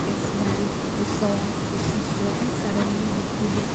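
Nothing in the speech stood out as a technical fault on listening.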